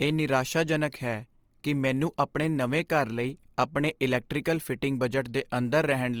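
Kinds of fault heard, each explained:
Opus compression: The speech carries a plainly audible grainy, rough texture, with tones turned noisy rather than swirling. The likely cause is an Opus encoder in its CELT music mode, at a rate that fits about 24 kbps, refilling starved bands with folded or noise-like content. On a spectrogram, the bands stay filled with few holes but look speckled. The audio runs fullband up to 20.2 kHz, then nothing above. The waveform shows little.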